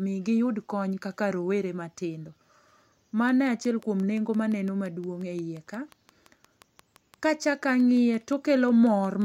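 From 3.29 s to 9.23 s, a regular train of clicks ticks at 5.7 per second, around forty pulses as loud as the speech, likely from interference.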